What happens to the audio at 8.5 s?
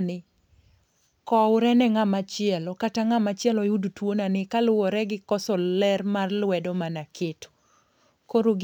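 A faint hiss and roughness rides on the speech, strongest on loud and bright sounds and gone in pauses. This is sample clock jitter, present throughout the clip: the converter's timing wanders by around 2 microseconds, leaving an error roughly 40 dB below the signal.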